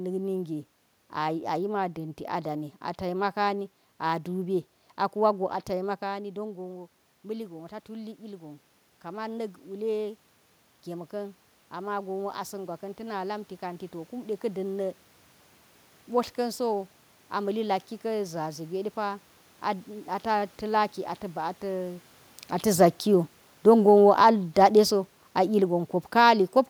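Speech recorded in a room, with two automatic gain control faults. Around 6 s the talker moves and the voice drops by about 12 dB. From 6.13 s to 14.7 s the automatic gain rises by about 9 dB. The voice and the room noise swell together over eight seconds. The level never fully recovers. Around 22 s the talker moves again. From 22.65 s to 26.36 s the automatic gain falls by about 5 dB. The voice sinks slowly along with its background.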